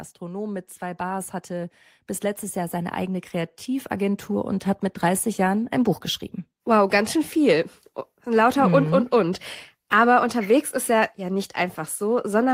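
From 0.19 to 1.82 s the level climbs by about 6 dB, and again from 2.53 to 6.06 s by about 8 dB: automatic gain rising both times, as the gain control judges the speech too quiet and slowly turns itself up. Voice and room noise swell together rather than the talker getting louder. On a waveform the envelope widens steadily across each span; on a spectrogram the whole frequency range, noise floor included, brightens evenly.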